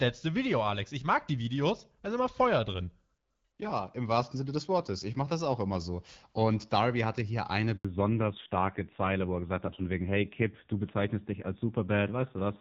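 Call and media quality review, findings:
Handover gap, 7.77 to 7.85 s, right after "hatte hier eine". Speech fades within tens of ms, then 80 ms of dead silence. No frames arrived while the call switched networks. Waveform shows a flat-line notch. Spectrogram shows a full-height blank vertical band.

Fallback to narrowband, 7.85 s to end. The call drops from HD Voice (AMR-WB, clean at around 12.65 kbit/s before the switch) to an older narrowband codec. The sound is duller and raspier, consistent with a low-rate AMR-NB mode such as 5.9 kbit/s. On the spectrogram, all energy above 4 kHz is cut off sharply at the switch point.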